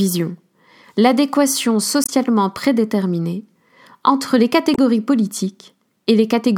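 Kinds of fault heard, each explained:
Damaged data in a compressed stream: corrupted bytes knock the decoder off its frames, causing short glitches in the speech at 2.04–2.10 s and 4.74–4.78 s.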